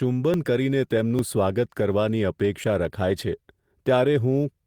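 At 0.34 s the speech jumps forward, a likely dropped buffer (overrun): the program fell behind, the hardware overwrote samples, and the two sides were spliced together. About 10 ms goes missing. At 1.19 s a similar jump skips ahead by about 20 ms. Between 1.78 and 1.80 s the sound turns briefly rough and noisy with no click and no jump. This is a lost packet rebuilt from error correction. The decoder filled the 20 ms gap with a low-bitrate copy carried in the next packet, which fits a single lost packet. At 2.64 s another skip of about 10 ms follows. From 3.09 to 3.11 s a second 20 ms rebuilt stretch has that grainy texture again. The overruns cut out audio and leave an audible splice. The rebuilt packets keep the timing intact and only lower the quality for that short moment.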